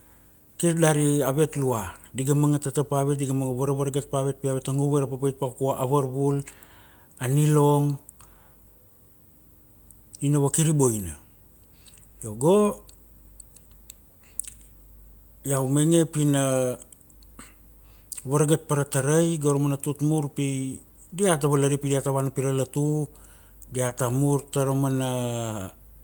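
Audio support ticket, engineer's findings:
Short concealed packet loss, 23.87–23.91 s: brief smear in the speech, about 20 ms of audio never arrived in time. Decoder packet-loss concealment extended the preceding sound from its pitch or as shaped noise, then crossfaded back into received audio.

Lost packet rebuilt from error correction, 23.89–23.91 s: 20 ms of rougher, noisier audio, no gap, consistent with a single lost packet. Jitter buffer/Opus decoder used the low-bitrate in-band FEC copy carried by the following packet.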